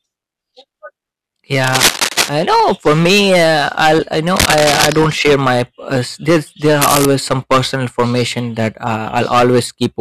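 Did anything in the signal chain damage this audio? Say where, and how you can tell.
Yes. The level fed into the converter or an earlier gain stage was about 24 dB too hot for the whole clip, so peaks are sliced flat, something like one sample in fifteen. That hard clipping turns every loud syllable into harsh fuzz with gritty upper harmonics.

The second fault is cable scratch noise, likely from a worn cable or connector in the analogue wiring being disturbed. Ragged bursts of scraping noise appear from 1.63 to 2.29 s, ending just before "I know", well louder than the speech. Another runs from 4.35 to 4.95 s, just after "me uh I'll I", still above the speech. A third, about level with the speech, runs from 6.82 to 7.05 s, after "there's there".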